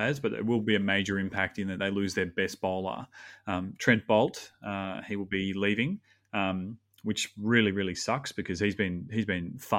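From 7.42 s to 9.52 s, channel delay (comb filtering): one channel lags the other by roughly one sample, about 0.02 ms, before mono summing. The first notch falls near 20 kHz, so the speech loses only its top end and sounds slightly dull.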